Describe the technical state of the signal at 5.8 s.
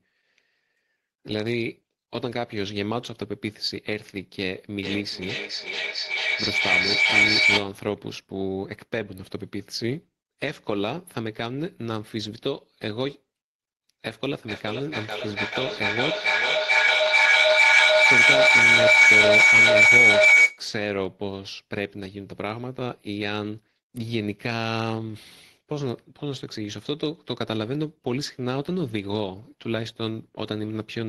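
At 5.8 s the signal is caught in a feedback echo between two devices, running from 4.83 to 7.76 s. Two devices on the same call share a room, so one loudspeaker replays what the other microphone sent, and that microphone captures it again, which neither echo canceller removes. The speech returns roughly every 0.4 s, thinner and more ringing each pass, and the loop is loud enough that repeats build up to about 9 dB above the speech rather than fading.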